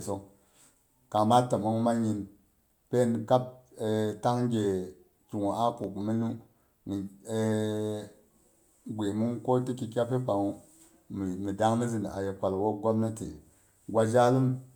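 Sharp clicks at 1.18, 3.79 and 5.84 s, thin vertical spectrogram lines and abrupt waveform jumps, likely dropped samples losing a fraction of a millisecond.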